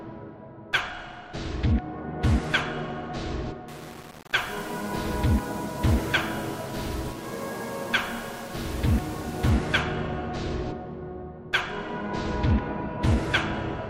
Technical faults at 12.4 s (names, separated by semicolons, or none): none